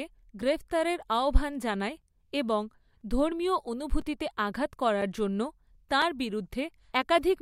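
From 1.01 s to 7.03 s, periodic USB or driver dropouts recur once per second: something stalls the audio path at a fixed interval, and each time a few milliseconds of speech are replaced by silence, giving seven or so regular ticks that cut into the voice.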